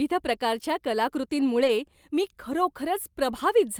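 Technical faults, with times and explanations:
1.59–1.69 s and 2.52–2.54 s, lost packet rebuilt from error correction: the speech never drops out, but both spots go briefly rough and noisy. Each lost packet was recovered from the low-bitrate copy that Opus tucks into the following packet, so the decoder filled the hole with a coarser version instead of silence. The first patch runs about 60 ms, which fits three 20 ms frames. The second is a single 20 ms frame.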